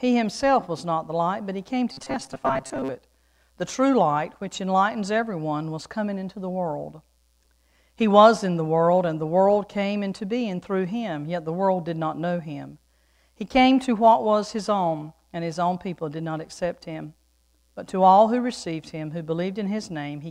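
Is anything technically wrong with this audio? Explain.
Yes. From 1.92 to 2.90 s there is robotic sound from repeated short buffers. New audio was likely reaching the playback stage too slowly, so the system kept replaying its most recent fragment of about 7.5 ms, roughly half of what is heard there, while the real audio in between was dropped. Those fixed repeats stamp a steady 133 Hz buzz onto the sound, making it rigid and metallic while it still loosely tracks the original.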